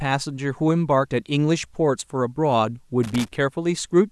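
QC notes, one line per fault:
3.03–3.36 s, loose connector crackle: for roughly a third of a second the speech breaks into an irregular burst of scratchy crackle. A worn or dirty contact in the signal path is making and breaking connection in rapid, uneven succession as it shifts, so the signal is chopped on and off many times within that span. Those abrupt interruptions produce the ragged, scratching texture rather than a clean dropout or a single click.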